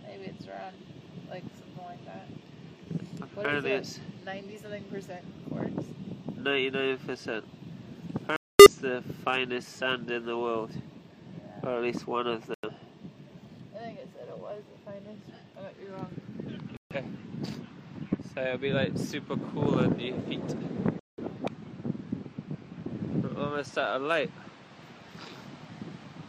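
At 8.36, 12.54, 16.77 and 20.99 s the sound cuts to silence abruptly, for about 0.31, 0.16, 0.19 and 0.24 s respectively. Each gap is a corrupt frame muted: bit errors damaged compressed frames, the decoder rejected them, and the player substituted silence for the span those frames covered. Timing stays intact, with audio resuming exactly where it would have been, and the varying lengths suggest different runs of consecutive frames lost.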